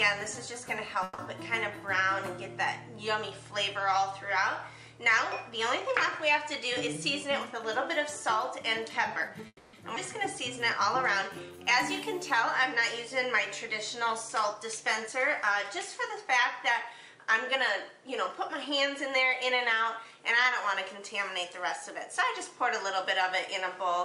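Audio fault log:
1.03 to 1.20 s, call audio freeze: the sound stalls for about 150 ms as a fading fill, likely packets held up and the jitter buffer running dry, then resumes intact.
6.87 to 9.43 s, jitter buffer speed-up: runs about 4% fast at unchanged pitch, roughly 150 ms trimmed in tiny pitch-period cuts to shed excess buffered delay.
9.47 to 9.75 s, call audio freeze: a 260 ms stall, the fill decaying into about 50 ms of silence, likely delayed packets emptying the buffer, then carrying on with nothing lost.
10.35 to 13.10 s, jitter buffer slow-down: plays about 3% slow at the same pitch, 91 ms added by repeating pitch periods to rebuild the buffer, so sounds stretch out.
13.67 to 20.05 s, jitter buffer speed-up: about 3% fast, pitch untouched, with roughly 200 ms shaved off in small repeated cuts to pull the delay back down.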